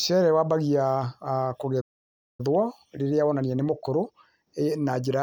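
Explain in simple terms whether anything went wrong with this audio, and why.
At 1.80 s the speech cuts to silence for 0.58 s, resuming at 2.40 s. This is a playback stall, likely the player running out of data.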